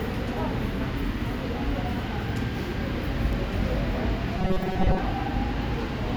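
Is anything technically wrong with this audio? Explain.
Yes. From 4.39 to 4.99 s, robotic sound from repeated short buffers: a rigid metallic buzz at 188 Hz, likely from a roughly 5 ms chunk looping over most of that stretch.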